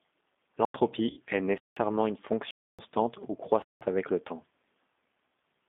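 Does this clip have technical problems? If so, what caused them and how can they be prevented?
Yes. The speech passed through an 8 kbit/s G.729 codec (G.729A) on a line limited to 200 Hz to 3.6 kHz. It rebuilds the voice from a filter and a few pulses, so the sound is narrow, rough and plainly synthetic throughout. Using a wideband codec such as G.722 or Opus where the link allows would prevent this.

The audio output buffer was likely not filled in time, so blocks of digital silence cut in abruptly. The holes fall at 0.65 to 0.74 s (about 93 ms, which fits a 4096-sample buffer), 1.58 to 1.77 s and 3.62 to 3.81 s (each about 186 ms, which fits an 8192-sample buffer), and 2.51 to 2.79 s (about 279 ms). Running audio processing on a higher-priority thread with larger buffers would prevent these underruns.

Network packets were dropped between 1.10 and 1.20 s, about 70 ms of audio. The decoder's VoIP packet loss concealment extended the last pitch and filter, producing a fading smear that stays weak briefly afterward. 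A jitter buffer with forward error correction, or a more reliable network path, would prevent this.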